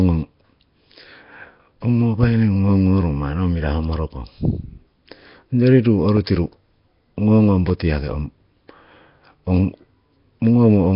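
Throughout, the speech has a rough, hissy halo and a smeared, underwater quality, with nothing above 5.3 kHz. The heavy damage is likely Nellymoser compression, at a low bitrate that fits roughly 22 kbps.

From 6.17 to 6.19 s, just after "onyori ruu", and from 7.70 to 7.72 s, just before "yaki ong", a single sharp loud pop rises a few dB above the speech, which carries on underneath. The likely cause is a sudden voltage spike added to the signal.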